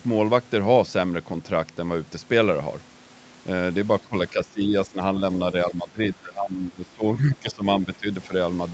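From 4.01 to 4.14 s, 4.3 to 5.0 s, 5.52 to 7.65 s, 7.82 to 8.08 s and at 8.27 s, the speech dips by up to about 15 dB, likely speech suppressed in double talk, where the echo canceller attenuated the near-end talker along with the echo.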